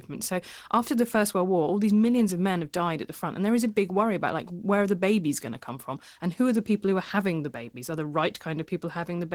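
From start to finish the speech sounds somewhat hoarse and faintly robotic, with a coarse, grainy texture, while its energy reaches up to about 20.2 kHz. This is Opus voice compression in hybrid mode: a linear-prediction coder handles the band below 8 kHz while a transform layer covers the top. The plainly audible roughness suggests a bitrate around 16 kbps, which forces a coarse excitation and sparse high-band detail.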